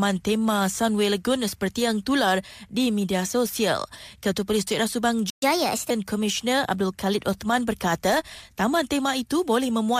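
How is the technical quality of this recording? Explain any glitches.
The recording has two linked glitches near the middle. At 5.3 s a playback stall drops the speech into 120 ms of silence, likely from the player running out of buffered data. The waveform shows a flat gap, and the spectrogram a blank vertical band. From 5.42 to 5.9 s comes catch-up at higher speed: the backlog plays at 1.25 times normal, raising the pitch about four semitones. On the spectrogram the harmonics shift upward and sit closer together in time until normal speed returns.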